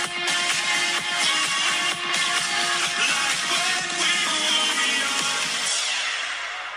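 A single tiny skip at 2.1 s, where roughly 12 ms of sound drops out and the waveform jumps abruptly instead of continuing smoothly. This is an overlap between stream segments: two consecutive segments carried time stamps that claimed the same stretch of time, so playback discarded the apparently duplicated portion even though that audio existed only once. The position, just after the two-second mark, fits a stream split into 2-second segments.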